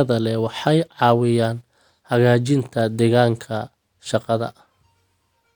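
No technical faults occur anywhere in the clip, so there is nothing to describe in time order.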